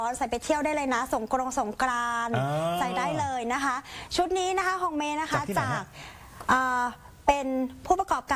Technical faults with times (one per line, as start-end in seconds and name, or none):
none